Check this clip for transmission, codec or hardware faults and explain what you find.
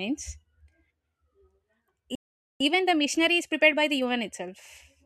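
Two linked faults are audible: a playback stall followed by time-compressed catch-up.

From 2.15 to 2.6 s there is a playback stall. The player most likely ran short of data or had its output thread blocked, so the speech cuts off mid-flow into about 0.45 s of silence before resuming where it stopped.

From 2.6 to 4.4 s comes time-compressed catch-up. To clear the backlog built up during the stall, the player trims and cross-fades short slices, running the speech at 1.25 times normal speed. It sounds hurried but keeps its pitch.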